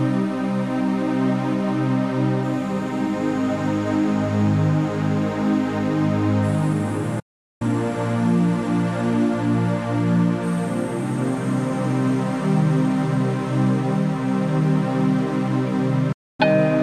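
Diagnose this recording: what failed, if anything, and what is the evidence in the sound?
The sound fades to silence within 8 ms at 7.19–7.62 s and 16.12–16.40 s. This is a digital broadcast dropout: the receiver muted on failed frames, losing that audio.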